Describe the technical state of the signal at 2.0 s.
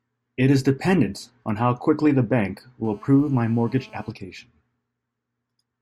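The signal is intact at 2.0 s, with no audible fault at that point.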